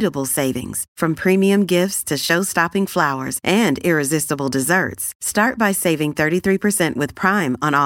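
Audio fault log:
No faults heard anywhere in this speech recording.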